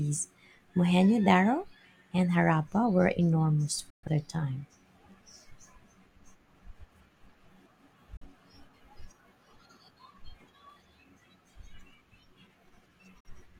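The receiver lost valid frames and muted three times, a digital broadcast dropout in speech: sound fades out within about 3 ms and falls silent at 3.90–4.09 s, 8.17–8.26 s and 13.20–13.30 s, with everything transmitted meanwhile lost.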